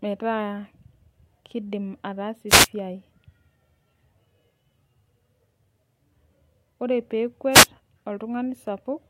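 At 2.48 s and again at 7.51 s, each lasting no more than a fifth of a second, you get a wireless microphone noise hit. The FM radio link fades as reflected signals cancel, so receiver noise surges up briefly as a quick swish of static.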